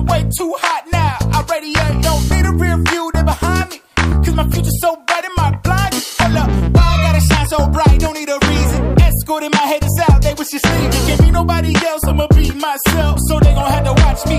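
No technical faults can be heard anywhere in the signal.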